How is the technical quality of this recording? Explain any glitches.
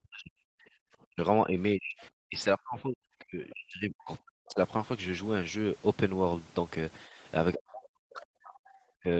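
Pretty rough, honestly. The talker keeps getting pushed down by the echo canceller, and the whole thing sits in a call band with nothing above 8 kHz.

Speech suppressed in double talk, at 0.02–0.4 s, 1.06–4.59 s, 7.06–7.16 s, and from 7.54 s to the end: the voice sinks or breaks up, very deeply except for the shallower dip around 7.1 s. That's likely the canceller ducking everything while both sides talked.

Background gated by the echo canceller, 0.68–0.78 s: the room tone briefly drops about 27 dB, then snaps back once the canceller releases during loudspeaker playback.

Other side's voice leaking through, 3.5–3.54 s: a tiny scrap of a second voice sits well below the talker. That's likely residual loudspeaker echo the canceller missed.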